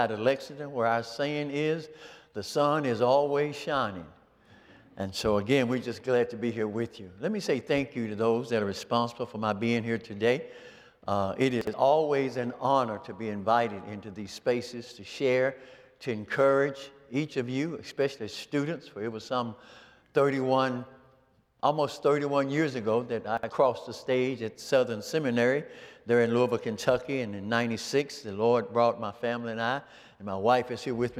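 The audio has chunks out of order at 11.61 to 11.73 s and 23.37 to 23.49 s, where a 60 ms chunk plays one position late, leaving a brief jumbled stretch. At 26.58 s, compressed frames are skipped: the sound jumps ahead by roughly 30 ms, which fits one dropped 26.1 ms frame.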